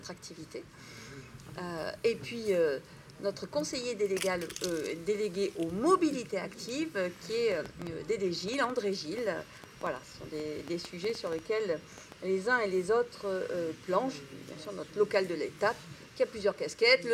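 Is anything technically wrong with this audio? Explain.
Yes. From 7.52 to 12.13 s there is a train of clicks. About twenty sharp pulses land on the audio, close to five per second, at an uneven pace. Each click has much the same shape. They peak well above the surrounding level, roughly 10 dB louder. The cause is likely electrical interference from nearby equipment or a faulty connection or power supply. They are heard as a ragged ticking over the sound, and they carry on through quiet moments too.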